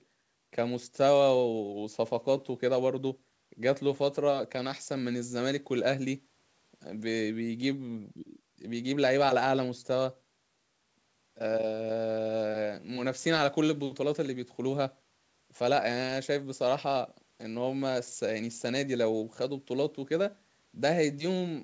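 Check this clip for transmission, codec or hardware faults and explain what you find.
Nothing here points to a transmission, codec or hardware problem, just speech that has come through a call's microphone processing and a G.722 link at 64 kbps, with the expected ceiling of about 8 kHz on the top end.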